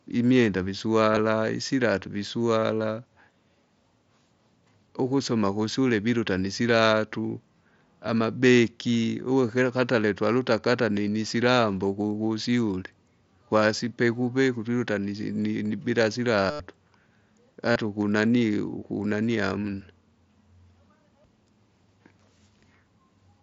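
Concealed Bluetooth headset packet loss occurs at 1.12–1.19 s (scattered), 2.59–2.62 s, 16.50–16.60 s and 17.72–17.76 s. Lost headset packets were patched by repeating recent waveform, giving brief buzzy held tones, longest near 16.5 s, with a slight warble as real speech resumes.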